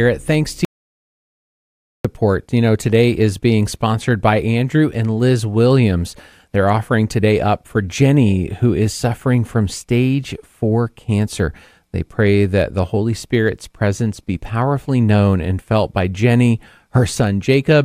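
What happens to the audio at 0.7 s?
At 0.65 s, right after "thanks to", the speech hits an audio dropout to silence that lasts until 2.05 s, so about 1.4 s of speech is lost. The input likely disconnected or was muted while the recorder kept writing silence. Unlike a natural pause or a noise gate closing, the gap holds no room tone at all, just dead silence, and the speech cuts off and returns abruptly mid-flow.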